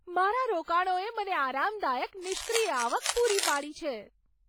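It's a speech clip with heavy codec damage throughout: ringing, washy smearing and a hiss that breathes with the voice, likely WMA compression at a low bitrate, around 24 kbps. Then from 2.22 to 3.66 s, right after "મને આરામદાયક", there's a dense, uneven scratching sitting only a few dB under the speech, likely cable scratch noise from a worn cable or connector being moved.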